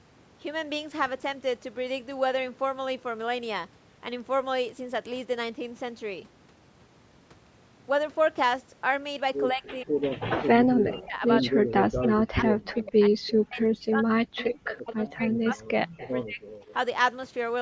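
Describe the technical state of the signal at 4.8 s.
At 4.8 s the signal is intact, with only the ordinary shaping of call microphone processing, which trims the deepest bass and leaves nothing above 8 kHz.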